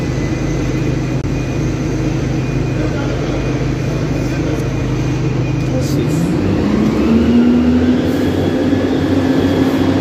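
A Bluetooth stall, likely from interference delaying packets until the headphones' buffer emptied, interrupts the audio from 1.22 to 1.24 s. Playback drops to silence for about 23 ms, then resumes once the delayed packets arrive, either where it stopped or a little further on.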